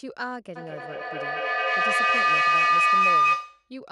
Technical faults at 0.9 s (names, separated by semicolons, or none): mains hum; feedback howl